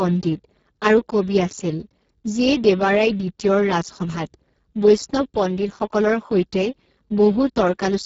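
Speex codec damage runs through the whole speech clip: the CELP coder has too few bits for the excitation, so speech sounds hoarse and noisy, which fits a very low setting near 6 kbps. There is nothing above 7.6 kHz.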